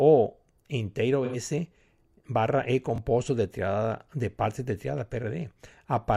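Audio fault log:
1.25–1.36 s: AAC frame loss with concealment. About 85 ms, which fits two lost frames, is rebuilt from the previous spectrum, giving a smeared, noisy patch rather than an exact repeat.
2.96–2.98 s: repeated buffer. Just before "de triada de parte", a 20 ms piece plays twice with a hard join, making a brief stutter-click. It is an exact copy, not a smear.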